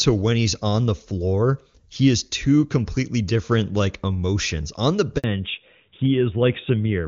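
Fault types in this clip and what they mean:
Handover gap: Right around 5.18 s the audio just drops out for about 60 ms, until 5.24 s. That's the phone moving the call to a different network, and for that short switch no speech frames came through at all. The sound fades out over a few tens of milliseconds, sits in dead silence, then picks up again once the new link is running. Whatever was said in that slice is simply gone.
Fallback to narrowband: As soon as the gap ends at 5.24 s, the call comes back over an older narrowband codec instead of HD Voice. Before the switch, the wideband path sounds clean and full, which fits its top rate. After it, everything above 4 kHz is cut off through to the end of the clip. The speech sounds duller and rougher, with the crisp sibilance and air at the top gone.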